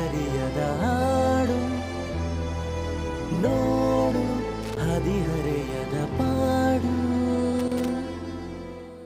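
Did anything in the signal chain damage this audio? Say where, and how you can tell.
Yes. A loose connector in the analogue wiring kept making and breaking contact, chopping the signal into irregular bursts of crackle at 4.63 to 4.77 s and 7.59 to 7.88 s.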